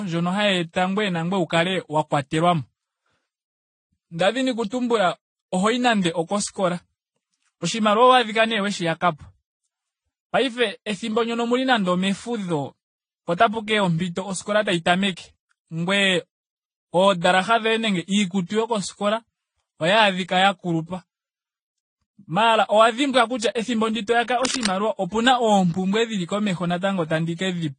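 Throughout the speech, the audio carries the stacked artefacts of transcoding between lossy codecs. It likely passed through several low-bitrate encoders, with swirly, smeared detail from each layered together, which fits an AAC and Vorbis chain around 32 kbit/s, and nothing remains above 10 kHz.

From 24.42 to 24.67 s, a burst of cable scratch noise cuts across the speech as dense, uneven rustling. It sits only a little below the speech level, likely from a worn cable or connector being moved and its contact resistance fluctuating rapidly.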